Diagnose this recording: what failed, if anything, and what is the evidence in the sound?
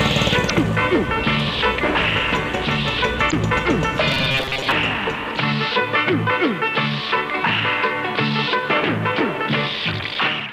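Codec stage: damaged data in a compressed stream at 0.46–0.51 s and 3.28–3.34 s. The decoder lost sync.

Driver or buffer stage, 4.12–4.72 s: robotic sound from repeated short buffers, a 134 Hz buzz. It is likely caused by roughly 7.5 ms chunks looping, which a spectrogram shows as a harmonic comb.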